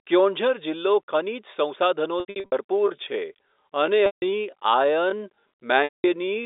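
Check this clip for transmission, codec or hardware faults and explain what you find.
Two kinds of fault are present, both on the speech path, while the G.711 telephone coding passes the 300 Hz to 3.7 kHz band with faint quantisation noise at most.

Packet loss with pitch repetition occurs at 2.2 to 2.52 s, 4.06 to 4.22 s and 5.84 to 6.04 s. The first gap scatters 240 ms of loss over 320 ms, with no run longer than 80 ms. The later gaps lose 160 ms and 200 ms. The receiver fills each hole by looping the last pitch period, so the sound holds on a buzzy, frozen tone, fades toward silence and cross-fades back. This differs from a plain dropout, where the sound cuts straight to silence without a sustained tone.

A time-stretched section runs from 2.72 s to the end, slowed to about 0.69 times normal pace. The pitch stays put, so the likely cause is software stretching the audio by repeating short pieces. 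The delivery abruptly drags. A slowed tape or a wrong sample rate would lower the pitch, and this section keeps its pitch.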